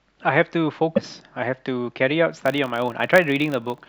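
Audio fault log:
0.96–0.99 s: broken MP3 bit reservoir. The speech skips forward, and the audio right after the skip comes out damaged, lasting about 32 ms. That is a little longer than one 26.1 ms MP3 frame. A likely cause is a cut in the stream. The following frame then reaches back into the reservoir for bits it stored earlier. It finds bytes from a different frame and decodes them as garbage before the stream recovers.
2.32–3.89 s: filter restarted on every block. From here to the end, a 50 Hz buzz rides along with the speech. It grows louder where the speech is loud and fades where it is quiet. The filter drops its stored state at every block boundary and starts again from zero. Each restart makes a tiny transient. At 50 per second they merge into a buzz, which fits 20 ms processing blocks.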